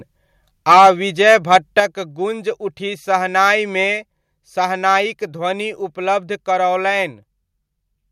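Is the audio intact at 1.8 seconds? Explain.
No. Just before 1.8 s, from 1.26 to 1.79 s, there is microphone overload. The input was likely set too hot, so the loudest peaks pushed about 4 dB past the converter's ceiling, and a small fraction of samples, roughly one or two percent, were flattened. The result is a harsh, crackly edge on the strongest syllables. On a waveform the peaks appear as squared-off plateaus, and a spectrogram shows broadband streaks above the harmonics at those moments.

At 1.8 s itself the microphone volume is stepped down. The call software likely reacted to that clipping by cutting the device's input level in one move, about 5 dB. Voice and background drop together and abruptly, right before "'गूंज उठी शहनाइ'मे". The waveform envelope shows a sudden narrowing at that instant, and the spectrogram dims uniformly across all frequencies from that point on.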